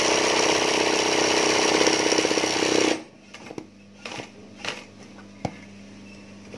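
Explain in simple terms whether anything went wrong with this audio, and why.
Nothing went wrong with this audio; there is no fault to explain.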